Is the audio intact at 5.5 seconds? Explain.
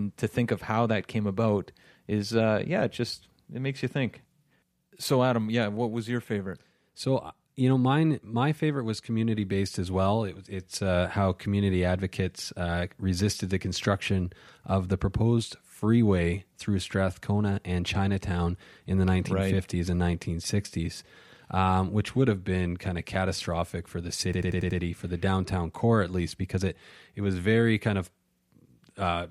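Yes, at 5.5 seconds the audio runs on cleanly, with no dropout, click, distortion or other fault audible at that point.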